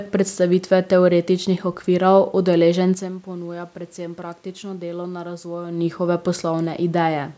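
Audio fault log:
No faults appear in the speech signal: the call microphone processing leaves nothing above 8 kHz, the room noise belongs to the recording itself, and the level changes around 3 and 5.5 seconds come from the talker moving relative to the microphone.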